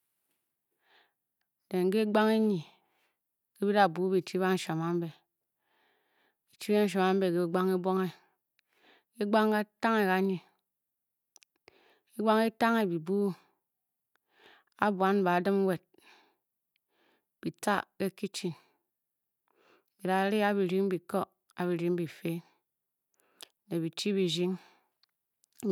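No technical faults can be heard anywhere in this recording.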